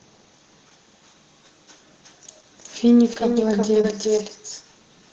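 From the start of the clip to its end, the audio carries an echo with no canceller. Each phrase returns roughly 0.4 s later at about 6 dB below the original, and thinner. The far end's loudspeaker output was picked up by its microphone and sent back over the network, and no echo canceller removed it, so every syllable gets a quieter delayed shadow.

Short concealed packet loss occurs at 3.13–3.17 s and again at 3.81–3.85 s. In each case about 20 ms of audio failed to reach the decoder in time. The receiver extrapolated the preceding sound across the hole and then blended back into the real signal. This is heard as a brief smear or wobble, and a short consonant in that spot can drop out.

Lost packets rebuilt from error correction cluster in the later part of the clip: 3.15–3.17, 3.19–3.21, 3.31–3.33, 3.41–3.43, 3.75–3.77, 3.83–3.85, 4.03–4.05 and 4.17–4.19 s, each 20 ms long. The packet following each lost one carried a low-bitrate redundant copy, Opus in-band forward error correction, which the decoder played in place of the missing frame. 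There is no gap, but each of these frames sounds rougher and noisier than its neighbours. Within the call path, whose audio band stops near 8 kHz, consistent with wideband Opus at around 20 kbps, these frames come through as brief patches of grain.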